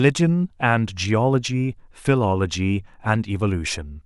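No technical faults turn up anywhere in this recording; the speech just runs along without a single glitch worth pointing out.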